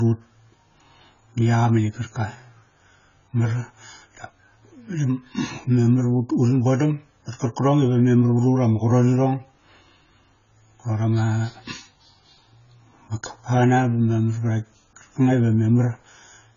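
Speech throughout with heavy AAC compression damage: nothing above 7 kHz, dull, smeared and fizzy, likely AAC-LC at a very low bitrate, around 16 kbps.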